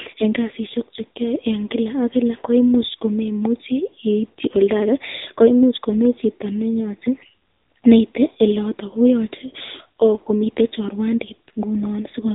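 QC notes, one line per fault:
Throughout, AMR narrowband mobile codec: a low-rate vocal-tract model, which fits a mode near 8 kbps, cuts everything above 3.8 kHz and leaves speech plainly buzzy and synthetic.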